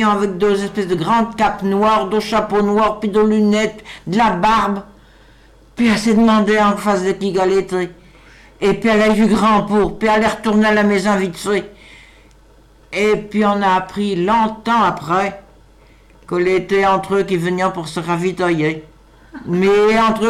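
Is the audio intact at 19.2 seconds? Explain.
Yes, the audio at 19.2 seconds is intact, with no dropout, click, distortion or other fault heard at that moment.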